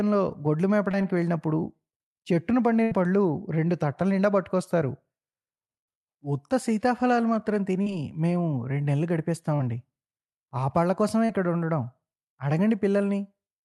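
Short concealed packet loss at 0.91 s, 7.83, 9.57 and 11.25 s: 20 to 40 ms gaps, bridged by continuing the last sound, leave quick smears or wobbles rather than audible holes. A burst of packet loss at 2.83–2.93 s is longer, about 80 ms missing. The concealment holds a buzz or hiss that fades before the audio resumes further on, skipping content.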